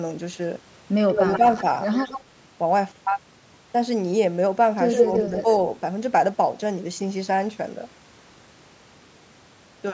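A delayed copy of the speech, trailing by about 124 ms, appears at 1.1–1.38 s at about the same loudness, faintly at 1.93–2.23 s, louder than the speech at 4.93–5.22 s, and quieter at 5.39–5.56 s with a 120 ms lag. This is echo leak, likely a loudspeaker echo the far-end canceller failed to remove.

Around 1.27–1.45 s and 5.22–5.46 s, the speech briefly dips by a few dB over short stretches. This is speech suppressed in double talk, likely the canceller turning down both its own talker and the echo while the echo overlapped the talker.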